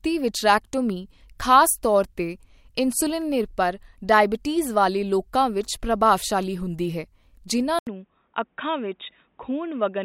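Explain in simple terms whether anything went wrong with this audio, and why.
At 7.79 s the speech goes quiet for a moment (about 80 ms), then returns duller, slightly quieter, with new background hiss and nothing above 3.8 kHz. That combination of gap, new noise and changed tone, not just muffling, points to an input switched to a poorer device, likely a headset.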